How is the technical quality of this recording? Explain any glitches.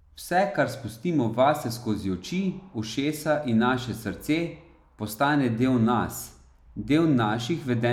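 No glitches can be heard anywhere in the recording, and its technical quality holds steady throughout.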